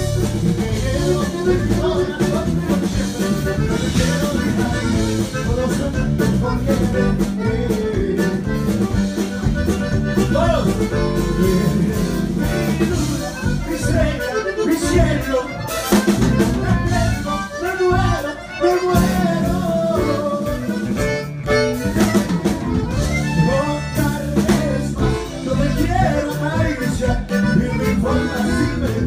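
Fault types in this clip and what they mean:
No technical faults can be heard anywhere in this clip. Nothing in the audio calls for a fault entry.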